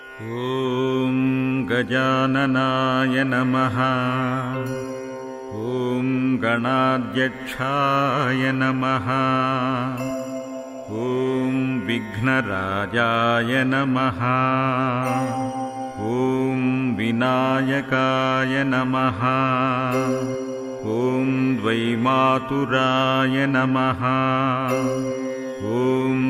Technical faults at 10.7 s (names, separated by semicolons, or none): none